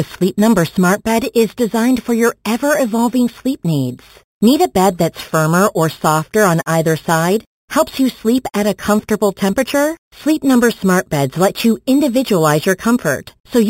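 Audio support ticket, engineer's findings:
Imaging from sample-and-hold upsampling, throughout the speech. Bright metallic fizz above the band, lowest copy in 4–8 kHz at about 17 dB below the signal. Mirror images fit an 8 kHz source raised to 48 kHz by sample repetition, with no anti-imaging filter. Unlike hiss, it stops in pauses and tracks speech level. Unlike codec artefacts, the image is a mirrored copy, moving down as pitch rises.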